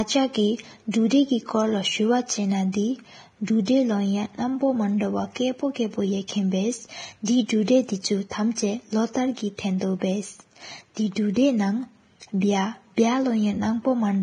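Vorbis compression runs throughout this speech recording. The treble stops dead at 9.7 kHz, and what remains below that edge is hissy and grainy, with roughened tonal detail and softened consonant onsets. That pattern is likely the result of heavy Vorbis coding at a low bitrate somewhere around 23 kbps. At that rate the residue above the smooth spectral floor gets so few bits that fine high-frequency structure collapses into noise of similar energy. Pre-echo occurs at 0.91–0.94 s, 3.65–3.68 s, 6.28 s and 7.25–7.28 s. Each is a brief hiss of roughly 16 to 25 ms arriving just before a sharp onset, which then sounds smeared rather than crisp. It happens because the transform spreads quantisation noise across its whole block. When a sudden attack falls late in a block, noise scaled for the loud attack leaks backward into the quiet moment preceding it, where nothing masks it.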